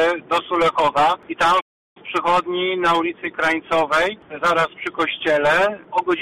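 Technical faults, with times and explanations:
1.60–1.97 s, playback stall: the sound cuts out abruptly mid-flow and the output stays silent for about 349 ms before the audio returns. The gap is a hard drop to nothing rather than a fade, which points to the output being starved of samples. The likely cause is the player's buffer running dry or its audio thread being held up, so nothing reaches the output until it recovers and resumes.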